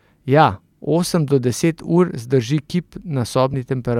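At 3.54 s, just after "zdrži kip", compressed frames are skipped. About one frame is lost, which fits a 32 ms frame length. The speech jumps ahead by roughly 30 ms.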